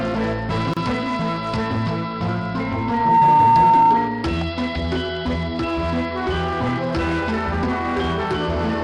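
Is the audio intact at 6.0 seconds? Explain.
Yes, the audio is intact at 6.0 seconds, with no fault at that moment.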